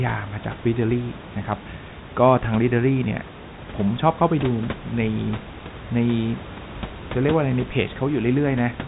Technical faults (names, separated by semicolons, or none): none